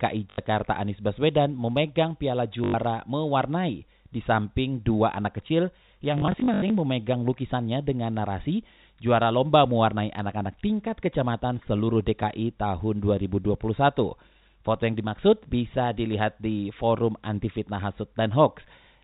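Right at the start, from 0.30 to 0.38 s, you get a packet loss with the last packet repeated. Audio went missing and the receiver kept replaying the final good chunk, so there's a quick robotic stutter. It happens again from 2.64 to 2.74 s. Between 6.18 and 6.70 s there's a scattered patch of dropouts, the longest about 80 ms, and the buzz sits near 50 Hz, which fits 20 ms packets. The telephone band, capped at 4 kHz by the G.711 coding, comes through as you'd expect for a phone line.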